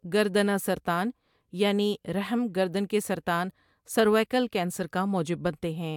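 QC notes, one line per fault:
No faults heard anywhere in the speech.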